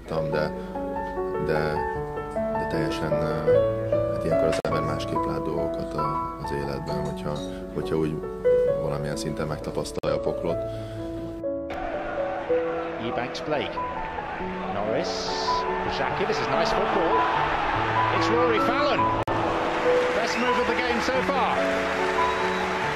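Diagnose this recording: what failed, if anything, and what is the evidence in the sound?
The failure sits at the codec stage: corrupt frame muted. Three holes of hard digital silence open abruptly at 4.60–4.70 s, 9.99–10.08 s and 19.23–19.31 s, each roughly 80 to 100 ms, which fits one or two compressed frames being rejected by the decoder and replaced with silence. Unlike a buffer underrun, the surrounding audio keeps its timing. Nothing is skipped or shifted, and there is no smoothed concealment filling the gap, only a clean cut to silence.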